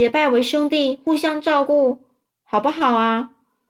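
Clock drift between sender and receiver runs throughout the speech: the sender's clock is slow by roughly 3%, so the receiver's jitter buffer keeps draining. From 0.03 to 3.66 s, repeated timing corrections splice in short repeated pieces, adding around a tenth of a second and slowing delivery to 98%. These corrections come across, if at all, as faint hiccups and a slightly dragging tempo, and a waveform or spectrogram shows small duplicated segments and discontinuities at uneven intervals.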